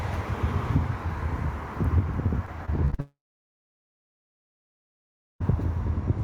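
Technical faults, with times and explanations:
2.45–3.00 s, repeated packet loss (robotic sound): The sound breaks up into a choppy stutter. Five short holes open in just over half a second, the longest about 38 ms. Each hole is patched by stretching the last bit of sound, so roughly a quarter of this stretch is filler rather than real audio. About 120 ms of the original is lost. The quick run of patched gaps gives the robotic texture.
3.00–5.42 s, long network dropout: The sound does not come back after the stutter. For a moment the last sound carries on as a fading buzz or hiss. Then about 2.2 s of near silence follows. The likely cause is that no audio arrived for about 2.4 s. The receiver could only extend the last sound briefly before running out of anything to play. When the sound returns at 5.42 s, the missing stretch is simply gone.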